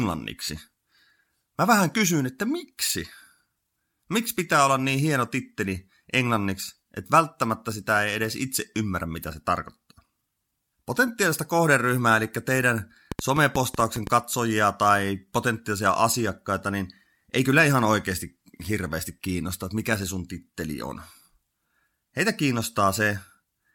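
From 13.12 to 14.08 s, between "kohderyhmää eli teidän" and "katsojia tai potentiaalisia asiakkaita", a train of clicks runs over the speech: around seven sharp, similar pops at about 7.3 per second, unevenly spaced and peaking roughly 10 dB above the voice. The likely cause is an external pulse source such as nearby interference or a faulty connection or power supply. Unlike a single isolated click or random crackle, these repeat with the same shape for nearly a second.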